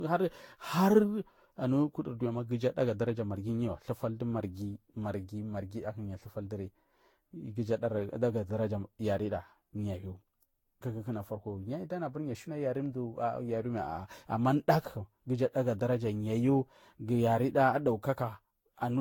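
Throughout the speech, swirly, hollow smearing and blurred consonant attacks exceed what one encode near 70 kbit/s explains, pointing to generation loss, likely around seven re-encodes stacking quantisation noise.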